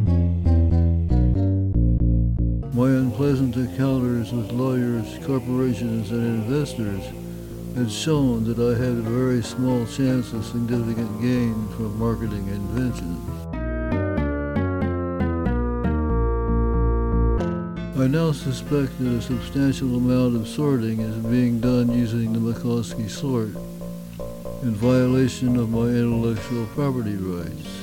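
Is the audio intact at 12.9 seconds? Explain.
No, a loud pop occurs from 12.77 to 13.01 s: two sharp thumps a few decibels above the sound, likely a voltage pulse from a switch or static.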